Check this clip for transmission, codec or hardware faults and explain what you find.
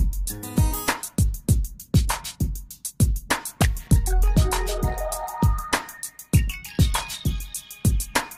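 One fault, late in the clip. From 7.25 to 7.29 s a brief glitch of misplaced energy cuts across the sound, peaking at about -25 dBFS. This is a corrupt frame decoded: flipped bits in a couple of compressed frames were played anyway, so misread codes scattered energy into wrong frequencies.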